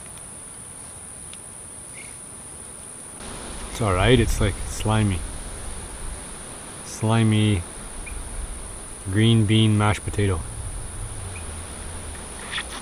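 At 2.21, 6.01 and 8.03 s, a dropped buffer (overrun) is the likely cause: the hardware overwrote samples before they were read. Each is an abrupt forward jump, skipping roughly 70, 20 and 50 ms of audio respectively, with no gap.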